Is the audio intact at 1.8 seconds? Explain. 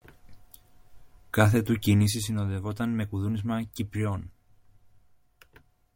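Yes, the speech is intact at 1.8 seconds, with no fault to be heard at that moment.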